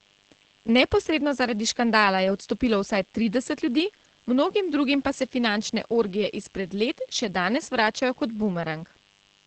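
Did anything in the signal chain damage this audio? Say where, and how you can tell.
Yes. In the analogue wiring, mains buzz runs throughout as a steady, raspy drone at a low level beneath the speech. Switching spikes twice per 50 Hz cycle create harmonics up to several kHz. A spectrogram shows evenly spaced horizontal lines, and the waveform shows spikes every 10 ms.

At the codec stage, heavy Opus voice compression affects the whole clip. The speech is muffled, hoarse and slightly robotic, which fits the SILK coder running in wideband mode at about 10 kbps. A spectrogram shows a hard ceiling at 8 kHz, with harmonics smeared into blurry 20 ms blocks.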